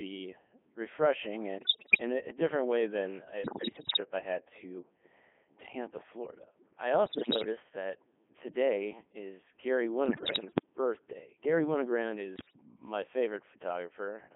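Codec 2 vocoder damage runs through the whole speech clip. The decoder rebuilds the voice from sine waves driven by pitch, voicing, energy and a coarse spectral envelope, so it sounds robotic and buzzy within roughly 250 Hz to 3.5 kHz. The heavy smearing fits a 3.2 kbit/s mode.

Bit errors on digital voice radio strike at 1.59–2.02 s (just before "a a different way"), 3.44–4.00 s (between "different way than a" and "I had to"), 7.06–7.46 s (before "that today is"), 10.06–10.66 s and 12.36–12.53 s. Corrupted bits scramble each frame's pitch, level and spectrum, so the voice lurches into warbles, bleeps and gibberish. The first burst is the worst, and the later ones are milder.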